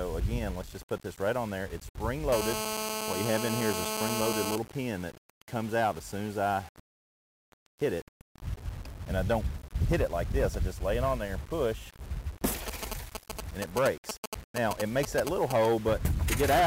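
The audio was likely rounded to 6 bits without dither, which gives low bit depth without dither throughout: grainy distortion that follows the sound, roughly 20 dB below it.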